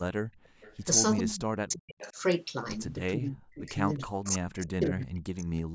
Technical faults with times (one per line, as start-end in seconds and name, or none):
0.23-0.61 background gated by the echo canceller
0.44-0.77 echo leak
1.22-2.17 speech suppressed in double talk
1.99-2.12 echo leak
3.03-3.69 speech suppressed in double talk
3.96-5.50 speech suppressed in double talk
4.24-4.36 echo leak
5.01-5.06 echo leak